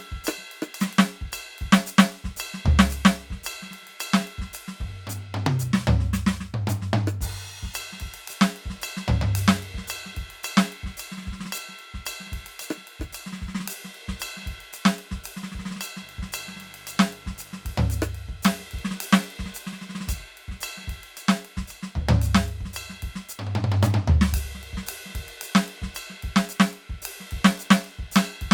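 Mains buzz from 16.00 to 17.89 s: switching spikes twice per 50 Hz cycle leak into the music, giving a raspy buzz roughly 30 dB below it.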